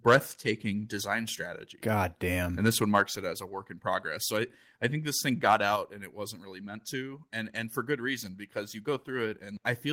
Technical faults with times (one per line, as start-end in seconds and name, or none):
0.07-0.17 microphone overload
2.95-3.02 microphone overload
5.76 microphone volume stepped down